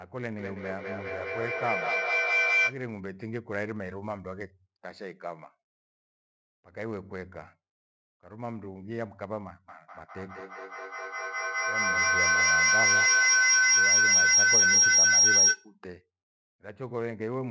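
A feedback howl twice: a microphone-to-loudspeaker loop gains level each trip, so repeats grow, returning about every fifth of a second. From 0.38 to 2.9 s it rings near 2 kHz, peaking about 10 dB over the speech; from 9.69 to 15.75 s, near 5 kHz, about 14 dB over.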